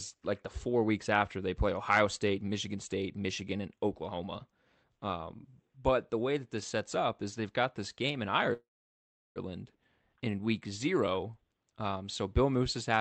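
At 8.53 s, just after "got this game in", a call audio freeze begins, most likely because packets were held up in transit and the jitter buffer ran dry. The receiver briefly continues the last sound before it fades, leaving about 0.7 s of near silence until 9.39 s. The speech then resumes from where it stopped, with nothing lost, so roughly 0.82 s of gap has been inserted and everything afterwards arrives later.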